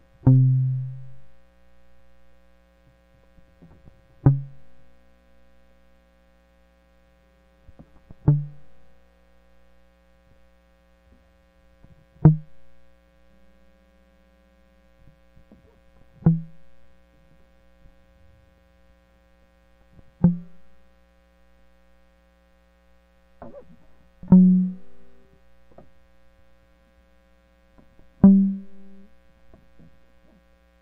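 It's a music clip with two spots where compressed frames are skipped, at 1.98 s and 16.83 s. The music suddenly jumps ahead, by roughly 40 ms at the first and about 20 ms at the second, which fits losing two frames and then one frame of 21.3 ms each. It's the sort of thing you get when frames are missing from the file or the decoder rejects them as damaged.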